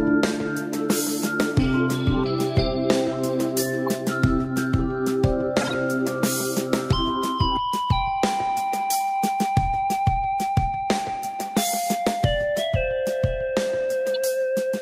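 Corrupt frames were decoded at 3.86–3.88 s, 5.61–5.74 s and 14.14 s. Damaged bits made the decoder misplace energy across a few frames, so each event is a brief chirp or noise blip, the 5.6 s one loudest and longest.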